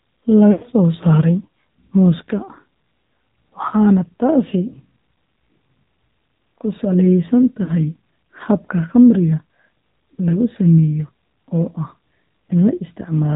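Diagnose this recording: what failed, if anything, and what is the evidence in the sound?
The whole thing has gone through the AMR narrowband mobile codec, so it's a codec-stage problem. Nothing gets above 4 kHz, and the speech has that buzzy, synthetic edge plainly audible throughout, which fits a low AMR-NB mode around 7.4 kbps.

There are also lost AMR speech frames, a network-side fault. At 0.52 to 0.65 s the sound smears and fades out over about 100 ms, which fits a run of five 20 ms frames. At 7.64 s there's a shorter 40 ms warble. The decoder is padding the gaps by reusing its last good settings at falling gain.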